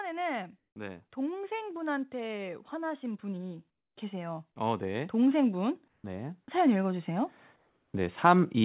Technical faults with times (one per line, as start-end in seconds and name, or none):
0.75-8.65 automatic gain rising
5.88-6.04 comfort noise in place of the background
7.56-7.94 comfort noise in place of the background